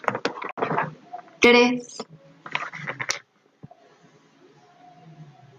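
At 0.51 s the speech drops to silence for about 80 ms, resuming at 0.59 s as though it had kept playing underneath. This is likely a Bluetooth dropout: a few audio packets arrived too late at the headphones and were discarded, leaving a hole.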